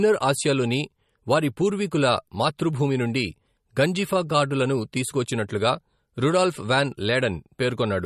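From start to finish the speech has a swirly, watery quality, and nothing comes through above 13.5 kHz, so the top end just stops dead. That's most likely MP3 compression at a low bitrate, around 40 kbps. With that few bits, the encoder chops the treble at a fixed point and drops weaker frequency detail, which flickers in and out from frame to frame, so the damage is plainly audible the whole way through.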